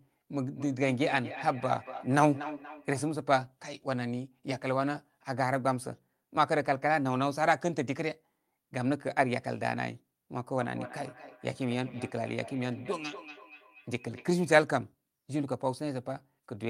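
From 0.4 to 3.16 s and 10.53 to 14.73 s, feedback echo between two devices returns the speech every fifth of a second, about 11 dB and then 17 dB down. Unlike room reverberation, these are distinct, evenly spaced repeats that grow thinner and ring.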